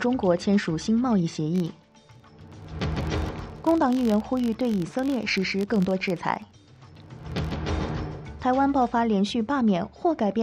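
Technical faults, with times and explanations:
1.56 to 7.58 s, filter restarted on every block: a steady 46.9 Hz buzz that tracks the signal's level. The filter clears its state at each block boundary, producing a small transient every block. That rate fits a 1024-sample block at 48 kHz.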